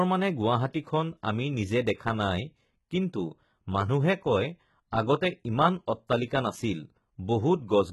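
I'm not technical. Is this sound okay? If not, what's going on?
No. Throughout, the s sounds come out gritty and lispy, with nothing above 11.8 kHz, likely from heavy HE-AAC compression rebuilding the treble from copied lower sound.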